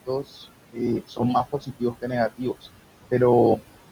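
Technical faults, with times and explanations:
Throughout, noise suppressor artifacts: the background gets pulled down by about 17 dB between phrases, then swells back under the speech.
1.52 to 2.11 s, speech cut by the noise suppressor: the suppressor mistook quiet bits of speech for noise, dipping them by up to about 16 dB, roughly a fifth of a second in total, so they sound swallowed.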